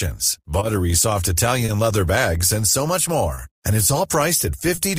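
Throughout the speech there is clock drift between sender and receiver: the sender's clock runs roughly 2 percent slow relative to the receiver's, so the jitter buffer keeps draining. The receiver compensates by repeating small slices of audio, which gives the delivery a faintly uneven pulse, with minor timing hiccups recurring at irregular intervals rather than at any fixed rate.

Four short stalls from a late packet occur, at 0.59 to 0.63 s, 1.65 to 1.70 s just before "leather bags and so", 3.34 to 3.39 s just after "bags and so much", and 4.75 to 4.79 s. Each time, the next packet missed its playout deadline and the buffer ran empty, so the receiver held the last sound for 20 ms at the first and last stalls and 30 ms at the middle two. Playback then resumed from the same point with nothing lost. Each stall is heard as a briefly stretched sound with a slight buzzy dip, and after it the stream sits 20 to 30 ms later than before.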